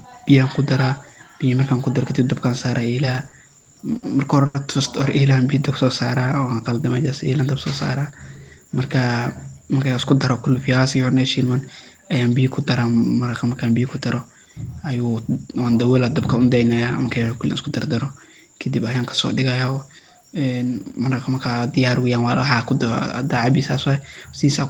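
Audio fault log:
3.05–4.56 s, repeated stalls (stutter): six brief hitches, the longest 80 ms, where late packets left the jitter buffer empty and the last sound was carried on, 210 ms in all. Nothing is lost, but the sound catches and drags, unlike smooth stretching.
5.37–5.86 s, jitter buffer slow-down: the receiver repeated single pitch periods to rebuild its reserve, adding 51 ms and running at 91% speed. Pitch stays put and the sound draws out evenly, without the separate catches of a stall.
7.97–9.08 s and 23.25–23.98 s, jitter buffer speed-up: an overfull buffer was trimmed by cutting pitch-period slices, about 70 ms each time, for 105% and then 108% speed. The sound hurries at unchanged pitch, with no audible gaps, unlike a dropout.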